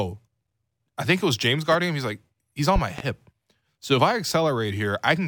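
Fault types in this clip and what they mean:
Loud pop: A sudden voltage pulse lands on the signal, likely from a plug, switch or static. One sharp pop sits at 1.72 to 1.76 s, a little above the speech. A louder double pop follows from 2.76 to 3.02 s. Speech continues underneath.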